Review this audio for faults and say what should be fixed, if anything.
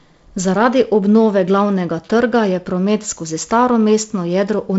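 Nothing stood out on listening, so there is nothing here that needs fixing.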